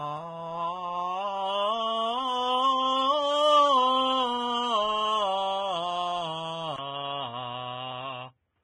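The music has heavy Vorbis compression damage throughout, likely from a low bitrate near 19 kbps: nothing above 9.7 kHz, with grainy, hissy treble and smeared attacks. At 6.76 s there's a 20 ms gap, then a boxy, narrowed sound cut off above 3.8 kHz to the end, at the same level with faint added noise. That's likely the input switched to a poorer device.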